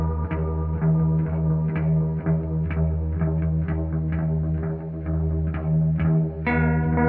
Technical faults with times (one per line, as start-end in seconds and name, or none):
0.00-7.08 wrong sample rate